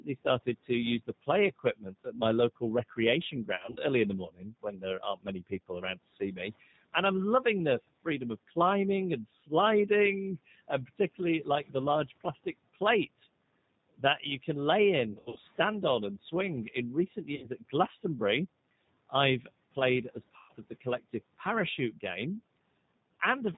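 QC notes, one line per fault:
Throughout: G.729 codec. The audio is speech carried at 8 kbit/s by the G.729A variant. The decoder rebuilds each 10 ms frame from a vocal tract filter, a pitch predictor and a few pulses. Nothing above 4 kHz survives, so the sound is dull and narrow. The coarse pulse model makes the speech plainly rough and slightly synthetic. The damage is clearly audible across the whole clip.
0.00 to 6.38 s: Speech cut by the noise suppressor. In this opening stretch the suppressor mistook parts of the speech for background noise. It pulled them down along with the room noise, by about 18 dB at the deepest. About a second of speech is affected in total. Soft consonants and word endings sound swallowed or faint. The dips come and go as the suppressor keeps misjudging the quieter speech.
3.56 to 3.78 s, 15.12 to 15.38 s, 17.36 to 17.48 s, 20.37 to 20.53 s: VoIP packet loss concealed by the speech codec. 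Audio went missing at each spot, 120 ms, 160 ms, 60 ms and 120 ms respectively. The first two gaps are scattered over 200 ms and 240 ms, with runs up to 40 ms and 60 ms. The decoder fills each gap by repeating its last pitch and filter with falling gain. This gives a brief buzzy, smeared tone. The speech stays weak or distorted for a short while after the audio returns.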